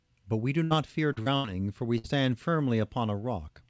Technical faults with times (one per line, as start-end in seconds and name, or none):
0.64-0.72 burst of packet loss
1.12-1.28 short concealed packet loss
1.36-1.46 burst of packet loss
1.98-2.06 burst of packet loss